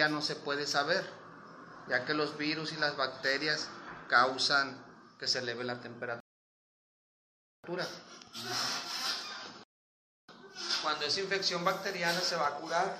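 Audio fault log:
6.20–7.64 s and 9.64–10.29 s, rebuffering stall: the player drained its downloaded audio and halted until more data arrived, so the sound drops to silence for 1.44 s, then 0.65 s, and picks up exactly where it stopped, adding time without losing any material.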